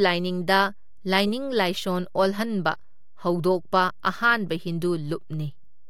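Speech recording with a DC offset running through its whole length. The waveform sits shifted off zero by a constant of about -37 dBFS. You cannot hear it directly. It wastes some headroom and shows up as steady energy at the very bottom of the spectrum.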